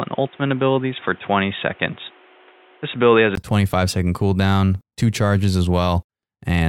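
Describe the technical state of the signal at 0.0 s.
At 0.0 s the speech is band-limited. It sounds dull and boxy, with a faint added noise floor roughly 30 dB below the signal. This lasts until 3.37 s. A gap of about 20 ms follows, and then the full band returns at the same loudness. The likely cause is an input switched to a poorer device, such as a headset's call profile, which passes a narrower band and has its own noise.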